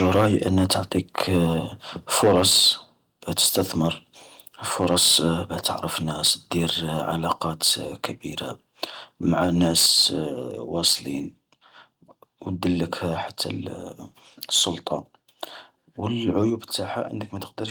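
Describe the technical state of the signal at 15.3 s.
At 15.3 s the speech plays through cleanly, with no dropout, click, distortion or other fault audible at that moment.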